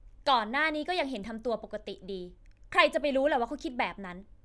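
Nothing goes wrong anywhere in this bit of speech, so there's no fault to point to at any moment.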